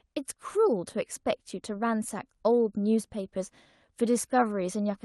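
No technical faults can be heard in this speech, which comes through a WebRTC call path with Opus coding.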